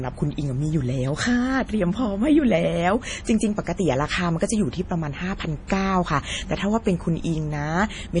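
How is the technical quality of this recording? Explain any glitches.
The quality is poor, with heavy MP3 compression damage throughout the speech. The encoder likely ran short of bits, a very low rate fitting around 32 kbps, so it cut everything above 10.6 kHz and dropped weak frequency lines frame to frame, leaving a dull, watery, swirling sound with metallic chirps on s sounds and smeared attacks.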